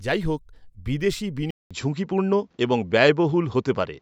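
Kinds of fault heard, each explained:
Input switched to a poorer device: the system most likely changed its capture source partway through, moving from the original microphone to a lower-grade one. At about 1.51 s the speech drops out for 200 ms, then returns with nothing above 7.6 kHz, so it sounds duller and boxier. The level shifts by a few decibels, and a new, faint background noise sits well below the speech until the end.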